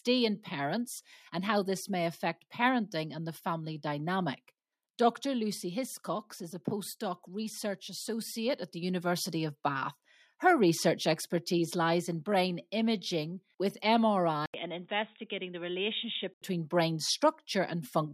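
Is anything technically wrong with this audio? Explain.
Yes. From 14.46 to 16.42 s the speech sounds like the input switched to a poorer device. The likely cause is the system changing its input mid-recording, either to another microphone or to a headset's call profile. An 80 ms silence marks the switch. After it, nothing remains above 3.8 kHz, so the speech turns dull and boxy. The level drops by about 5 dB. A new background noise appears, roughly 55 dB under the speech.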